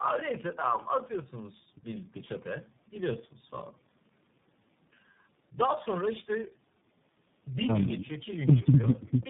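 Speech with tandem speech coding throughout. It sounds rough, muffled and warbly, with nothing above 3.8 kHz. That fits repeated decoding and re-encoding through several narrowband codecs.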